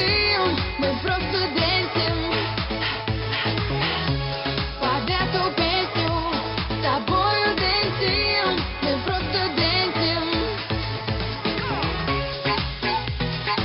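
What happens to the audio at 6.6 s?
Nothing goes wrong at 6.6 s; the audio plays through that moment intact, with no dropout, click, glitch or other fault.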